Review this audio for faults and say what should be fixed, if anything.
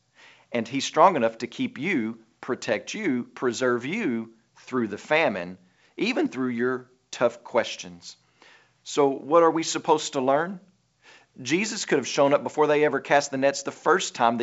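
No faults; nothing needs fixing.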